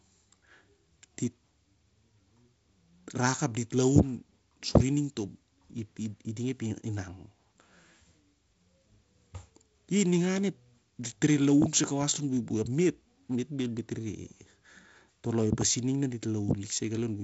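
No faults in this speech; the top ends near 7.7 kHz with a faint upper-band hiss and a slightly grainy lower band, which fits G.722 wideband telephone coding at 48 kbit/s.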